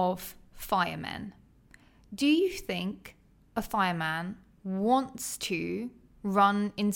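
No technical fault can be heard anywhere in the speech. Nothing in the audio points to trouble in how it was captured, processed or played back.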